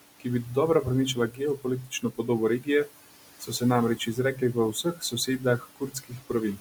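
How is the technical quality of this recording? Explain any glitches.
The recording is held back by heavy noise suppression, which both colours the background and eats into the speech in three places.

Noise suppressor artifacts run through the whole clip. The suppressor pulls the bands it judges to be steady noise down by about 16 dB, frame by frame, so the room noise, which sits about 15 dB below the speech, drops away in the gaps and swells back under each phrase. On a spectrogram the noise floor looks blotchy, with speckled isolated time-frequency cells instead of an even haze, and the background pumps visibly between phrases.

Speech cut by the noise suppressor happens three times: from 1.15 to 2.28 s, just after "ki bi dodobra", with drops of up to about 17 dB across roughly 0.4 s in total; from 2.6 to 2.88 s, up to about 15 dB over about a tenth of a second; and from 3.97 s to the end at 6.6 s, up to about 18 dB over most of a second. 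The suppressor mistook quiet speech energy for noise and turned it down with the background, so soft consonants and word endings sound swallowed or faint. The waveform shows abrupt dips in the envelope, and the spectrogram shows high-frequency consonant energy punched out in short gaps.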